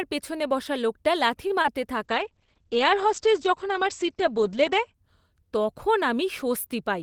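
At 1.47 s, just after "পিছনে বসা লোকটা লাথি", a short stall from a late packet holds the sound for 25 ms, then resumes where it left off. Nothing is lost; the audio only arrives 25 ms later.

At 1.62 s, a short concealed packet loss is different: 20 ms never arrived and was replaced by guessed audio, leaving a brief smear where real sound is missing.

From 2.03 to 5.0 s, a call bitrate drop from 32 to 9 kbps narrows the bandwidth from 20 kHz to 8 kHz. The speech turns muffled and rough for seconds, not in a momentary blip.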